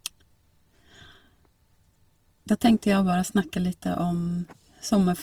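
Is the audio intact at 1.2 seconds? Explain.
No. Throughout the clip, speech sounds grainy and rough, likely from Opus compression near 24 kbps refilling starved bands with noise. A spectrogram shows fuzzy, speckled upper bands.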